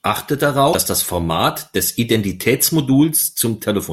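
At 0.69 s the speech breaks into a brief glitch that lasts until about 0.75 s. That is damaged data in a compressed stream. A short stretch of the encoded bytes arrived wrong. The decoder could not read those frames correctly, so it lost sync. It then had to hunt for the next valid frame header before normal decoding resumed. The result is a sudden blip of about 50 ms.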